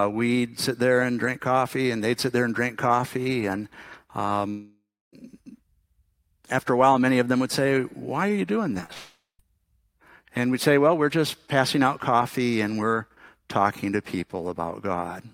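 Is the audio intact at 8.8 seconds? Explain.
No. Right after "are you doing", from 8.75 to 8.90 s, repeated packet loss leaves four short gaps, each patched by stretching the preceding sound. Unlike a single dropout, this gives choppy sound with pieces missing.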